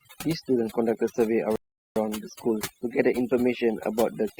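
A speech recording with overdone noise removal throughout. The suppressor was set too aggressively, so it drives individual frequency bands down or off whenever they sit near its noise estimate, taking low-level parts of the voice with them. The background drops and breaks up into twinkling specks. At 1.56 s a rebuffering stall cuts the audio to silence until 1.96 s. The player ran out of downloaded data and waited for more, then resumed exactly where it stopped, adding 0.40 s with nothing lost.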